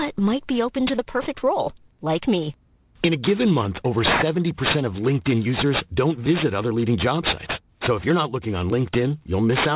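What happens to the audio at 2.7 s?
At 2.7 s, as throughout the clip, the speech carries aliasing: the sound points to a drop from 48 kHz to 8 kHz without filtering, so content above 4 kHz folds back down. Sibilants turn gritty and metallic, with aliases fairly strong, about 10 dB below the signal. A spectrogram shows energy packed hard against a 4 kHz ceiling, with mirrored, unrelated streaks.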